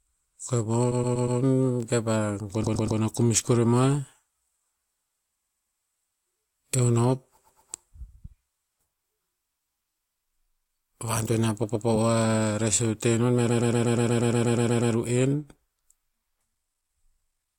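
Speech with repeated frames at 0.91, 2.63 (before "a kumis koremoah"), 5.41, 7.37, 11.63 and 13.49 s: an identical 120 ms block, consistent with six compressed frames, replays two to twelve times, stretching time rather than leaving gaps.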